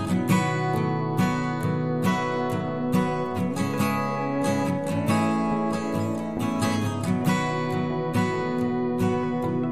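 Nothing in this audio stands out as a technical fault, so there's no problem to point to at any moment in it.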